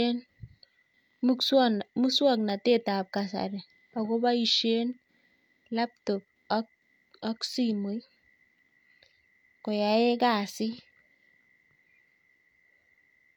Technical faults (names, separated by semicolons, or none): none